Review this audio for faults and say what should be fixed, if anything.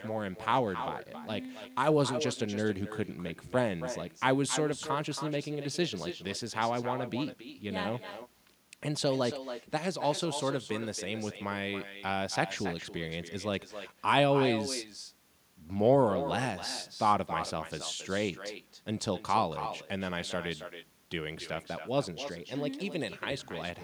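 The whole speech recording carries a DC offset: the waveform sits shifted off zero by a constant amount. It is inaudible in itself, unlike low hum, which has a pitch, and shows instead as steady energy at 0 Hz while eating headroom. A high-pass or DC-blocking filter at capture prevents it.

Throughout, there is also echo with no canceller. Each phrase returns about a third of a second later, about 10 dB quieter and thinner, because the far end's loudspeaker feeds its microphone. Room reverberation would instead smear continuously without a distinct delayed repeat. Enabling acoustic echo cancellation or using a headset at the far end stops it.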